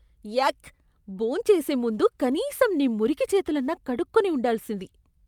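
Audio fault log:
Nothing stood out as a fault on listening to this speech recording.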